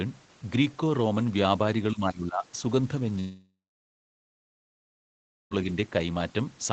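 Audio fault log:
1.91–2.56 s, speech suppressed in double talk: the speech dips by about 15 dB, with the affected parts totalling roughly half a second. It is likely an echo canceller that, with both ends talking, could not separate this talker from loudspeaker echo and attenuated both.
3.19–5.54 s, long network dropout: the last sound stretches into a fading buzz, then 1.93 s of silence, and speech resumes with 2.32 s gone. This is likely a network gap, with the receiver extending the final audio until concealment gave out.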